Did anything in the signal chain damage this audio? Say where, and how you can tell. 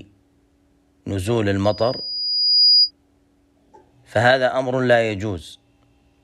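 Yes. Between 1.64 and 2.91 s a loudspeaker feedback squeal appears in the analogue acoustic path, where a microphone is hearing the loudspeaker it drives. A pure tone at 4.9 kHz swells over about a second until it sits roughly 5 dB above the program, because the loop gain exceeds unity at that one frequency. On a spectrogram it shows as a single thin horizontal line brightening at 4.9 kHz. In the waveform the envelope grows steadily.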